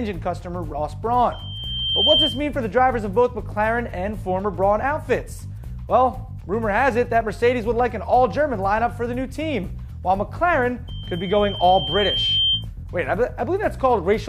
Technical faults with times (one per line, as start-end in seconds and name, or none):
1.31-2.47 loudspeaker feedback squeal
10.88-12.66 loudspeaker feedback squeal